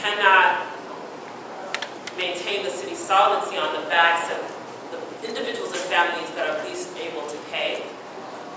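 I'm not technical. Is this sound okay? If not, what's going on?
Yes, nothing in this recording needs attention.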